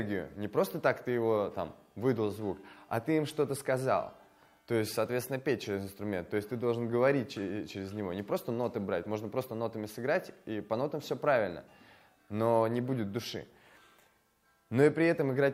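From 0.24 s to 15.49 s, faint ticks recur about every 0.15 s. There are around a hundred of them, clearest where the sound is loud and bright. These are clock slip clicks, likely from two devices running on unmatched clocks. The regular spacing fits a clock error of roughly 150 ppm, with a single sample dropped or repeated at each slip.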